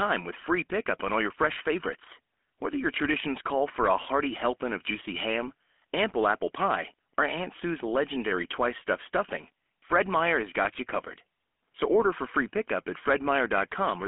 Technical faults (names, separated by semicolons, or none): GSM full-rate codec